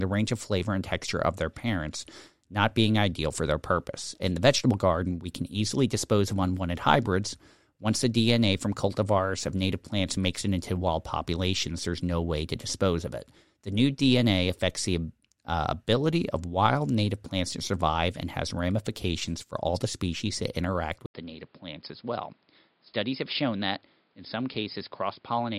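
At 21.06 s there's a brief 80 ms gap, then the speech comes back duller, noticeably quieter, with nothing above 5.2 kHz and a new, faint noise floor through to the end. That's most likely the input switched to a poorer device mid-recording.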